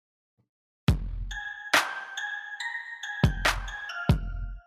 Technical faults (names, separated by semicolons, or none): none